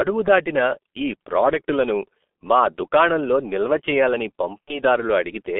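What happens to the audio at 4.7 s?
Just after "మా దుకాణంలో నిల్వ చేయాలని", from 4.62 to 4.79 s, VoIP packet loss is concealed by the speech codec. About 60 ms of audio went missing, which fits two lost 30 ms frames. The decoder fills the hole by extending its last pitch and filter at falling gain, producing a buzzy tone or coloured noise that fades, rather than the silent gap or click of a plain dropout. It then takes a moment to recover its full level.

Under this lies the G.723.1 codec, heard across the whole clip. At about 6.3 kbit/s, its band is held to roughly 250 Hz–3.5 kHz and its speech model is updated slowly. The result is muffled, hoarse speech with smeared consonants, a steady coloration rather than a brief event like the concealment.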